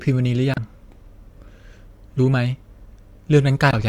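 Speech clip with damaged data in a compressed stream: corrupted bytes desynchronise the decoder, producing brief glitches at 0.54–0.58 s and 3.70–3.74 s.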